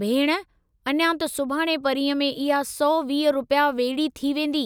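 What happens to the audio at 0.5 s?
Nothing goes wrong at 0.5 s; the speech there is intact and free of any audible fault.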